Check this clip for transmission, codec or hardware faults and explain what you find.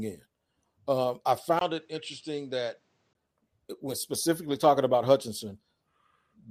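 One fault here. From 1.59 to 3.15 s, after a 20 ms gap, the speech goes dull, about 5 dB quieter, with nothing above 8.5 kHz and a faint new noise floor. That's likely the input switched to a poorer device.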